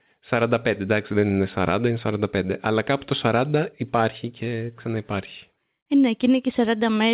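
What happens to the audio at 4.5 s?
Nothing goes wrong at 4.5 s: the speech continues intact through that moment, carried by the call path's G.711 mu-law coding with its usual band limit, and nothing above 4 kHz.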